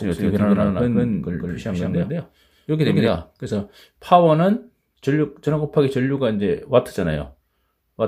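A doubled audio track is already under way when the sound begins and runs until it cuts off abruptly at 3.08 s. A second, full-band copy trails the original by around 150 ms at roughly the same level. This is likely caused by the audio being captured twice through paths of different latency. Unlike an echo or reverb, the copy has no decay, repeats only once and adds no room colour.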